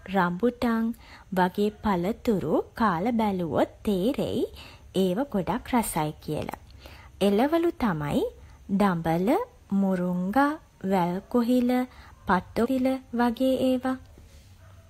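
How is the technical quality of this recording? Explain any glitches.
One glitch stands out, at 12.61 to 12.67 s: a brief blip after which the speech jumps ahead, with part of the programme missing. The likely cause is a stream segment skipped, where one chunk failed to load and playback resumed at the next. Unlike a dropout, no silent gap replaces the lost material; the speech simply lurches forward.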